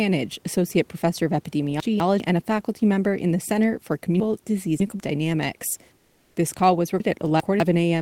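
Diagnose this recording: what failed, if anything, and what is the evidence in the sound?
Chunks out of order, network or buffer stage: 200 ms blocks play late at 1.8–2.2 s, 4.2–5.0 s and 7.0–7.6 s, giving jumbled bursts with hard joins.

Comfort noise in place of the background at 5.97–6.35 s: the real room tone becomes flat synthetic hiss for 380 ms, about 1 dB quieter, likely from Opus DTX in the codec.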